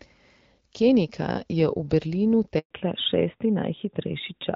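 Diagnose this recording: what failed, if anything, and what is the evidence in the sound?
A network handover interrupted the call: the link switched networks and no speech frames arrived from 2.59 to 2.71 s. The speech fades out within tens of milliseconds and stays silent for 120 ms until the new link delivers audio, so that stretch is lost.

After the handover, the codec stage fell back to narrowband: from 2.71 s to the end, everything above 4 kHz is gone. Before this the speech carried HD Voice brightness, consistent with AMR-WB near 12.65 kbit/s. Afterwards it sounds duller and rougher, which fits AMR-NB at 12.2 kbit/s.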